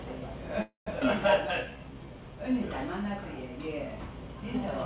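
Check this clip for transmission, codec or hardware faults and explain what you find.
Three transmission faults show up, all tied to packet timing on a call path whose band stops at 4 kHz, consistent with a G.711 mu-law codec at 64 kbps.

Call audio freeze, 0.62 to 0.88 s. The likely cause is packets held up in transit until the jitter buffer ran dry. The receiver carried the last sound forward for about 244 ms as a fading buzz, with the final 130 ms falling to silence. When packets resumed, the sound continued exactly where it stopped, so nothing is lost, but the gap leaves the playback running 244 ms later than before.

Skip ahead, 1.00 to 1.03 s. A short stretch of audio was discarded, either lost in transit or dropped by the jitter buffer as it shed the excess delay, while later packets were already queued. Roughly 150 ms of sound is missing, and the two sides are joined with only a 6 ms bridge. 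The result is an abrupt forward jump rather than a pause.

Jitter buffer slow-down, 1.66 to 2.53 s. With its reserve running low, the buffer rebuilt margin by repeating single pitch periods and small slices of quieter material many times over. This adds 138 ms across the span, so the sound plays at about 85% speed while keeping its original pitch. It comes across as drawn-out and slightly sluggish.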